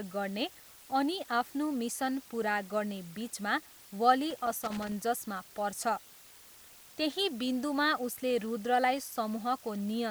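From the start, the speech carries a steady, even hiss. This is low bit depth with dither, pointing to about 8 bits, noise roughly 20 dB below signal. From 4.30 to 4.92 s, just after "पुरा गर्ने बिचमा वली", loose connector crackle breaks in. A failing contact chops the signal into irregular scratchy pops.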